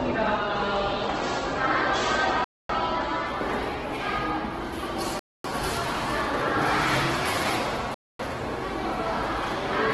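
Across the whole clip the everyday sounds come through rough and grainy, with tonal parts dissolving into a noisy, sandpapery texture and nothing at all above about 12 kHz. This is likely Opus compression in its music (CELT) mode, heavily starved of bits. The encoder keeps each band's overall energy but fills the detail with folded or noise-like content, which fits a very low rate of roughly 12 kbps.

At 2.44 s, 5.19 s and 7.94 s the audio drops out completely for 250 ms before the sound resumes where it left off. This is a gap between chunks: the audio was handled in 2.5-second pieces, and silence was inserted at each join. No material goes missing, but the steady rhythm of dropouts, one every 2.75 s, breaks the sound's continuity.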